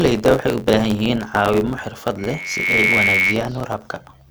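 Throughout, a block size mismatch (truncated) adds a buzz near 91.9 Hz. The sound runs 1.07 times fast at normal pitch, which fits 512-sample blocks losing their ends.

From 2.18 to 3.39 s, just after "caawimo xirfad", a loudspeaker feedback squeal at 2.2 kHz swells for under a second. It ends about 5 dB above the speech.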